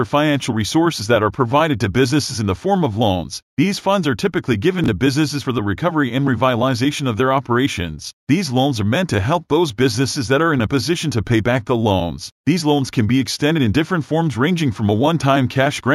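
At 4.84 to 4.88 s the speech briefly jumbles: a case of chunks out of order. One 20 ms block of audio reached the output a single slot late, so it plays after the block that should have followed it. No audio is missing, but the swapped order leaves three abrupt joins where the waveform does not line up, heard as a short scrambled flicker in the speech.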